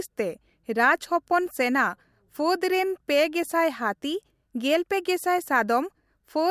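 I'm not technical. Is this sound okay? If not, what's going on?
Yes, nothing in this speech recording points to a technical problem with how the sound was captured or passed along.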